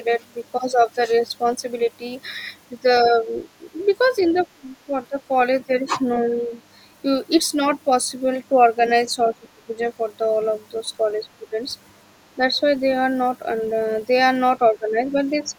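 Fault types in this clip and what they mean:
Other side's voice leaking through: A faint second voice sits under the speech, first as a brief scrap at 0.8 s, about 35 dB below the talker, then as a longer stretch from 3.81 to 4.46 s, about 25 dB down. This is likely loudspeaker playback of the far end reaching the microphone, with the echo canceller leaving a residue of it in the outgoing signal.
Speech suppressed in double talk: The talker's level sags in short patches spread across 3.04 to 5.29 s, 6.24 to 6.5 s, 9.3 to 9.8 s, 11.39 to 12.56 s and 14.59 to 15.46 s. Each window holds well under a second of reduced sound. The deepest dips reach about 20 dB and the others about 10 dB. The likely cause is the echo canceller attenuating everything when it cannot separate the near talker from overlapping far-end echo.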